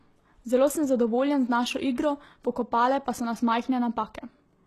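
From start to finish, the speech carries plainly audible damage, most likely from HE-AAC compression at a very low bitrate, which fits roughly 16 kbps. The top is sharply cut, with nothing above 12.3 kHz. Below that, the treble is not the original. It has been rebuilt by copying lower bands upward and shaping them loosely. The harmonics do not line up across the join. S sounds come out gritty, metallic or lispy.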